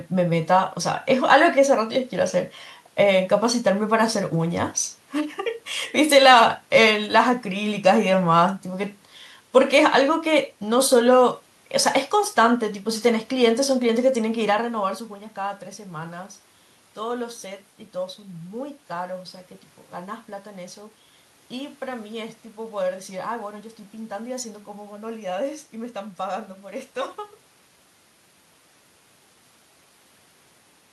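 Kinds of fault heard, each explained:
No system fault is present in the speech signal; the background of the room and the change in level about halfway through, where the talker shifts position, are part of the recording itself.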